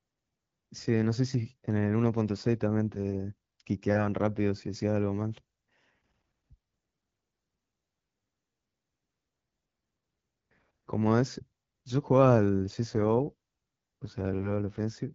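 Rougher, more synthetic speech from 7.59 to 9.29 s and 12.83 to 14.94 s, with no gap or band loss, fits an AMR rate drop from 12.65 to 6.6 kbit/s on the wideband link.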